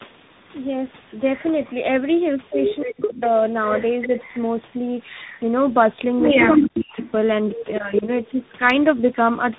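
Throughout this speech clip, tandem speech coding leaves the audio rough, muffled and warbly, with nothing above 3.8 kHz. The coarse grain layered on top of a narrowband, smeared quality suggests the signal was coded more than once in a chain, which fits a low-rate AMR-NB stage followed by a CVSD link. A single codec would sound cleaner, and a simple bandwidth limit would sound dull without the roughness. Speech suppressed in double talk pulls the voice down by roughly 40 dB from 2.83 to 3.22 s and again from 6.52 to 6.98 s, with a much shallower dip of about 5 dB from 4.06 to 4.10 s. The likely cause is an echo canceller turning its own talker down while the far end spoke. Packet loss would leave abrupt gaps or repeated fragments, but here the level sinks and recovers. An echo leak returns a delayed copy of the voice 287 ms behind the original, most likely because an echo canceller let loudspeaker pickup through. 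It appears in short scraps about 10 dB below the direct speech at 3.69 to 3.76 s and 4.02 to 4.27 s, then at roughly equal level from 6.47 to 7.11 s. The fixed 287 ms lag marks it as echo and not room reverberation, which would trail off smoothly without a distinct repeat. The call microphone processing's bass roll-off is normal here.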